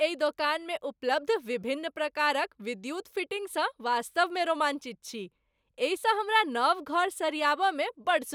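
Nothing to flag here: the recording runs along without a single dropout, glitch or distortion anywhere in it.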